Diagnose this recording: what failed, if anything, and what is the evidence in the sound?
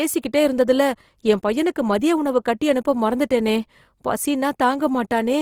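Across the whole recording the speech has a grainy, rough texture, with upper harmonics turned noisy rather than clean, yet the top end stays open, reaching to about 20.3 kHz. That points to the codec stage, and the likely cause is Opus compression in its CELT music mode at a rate that fits roughly 24 kbps. The encoder preserves each band's energy but refills starved bands with folded or noise-like content, hence the plainly audible graininess.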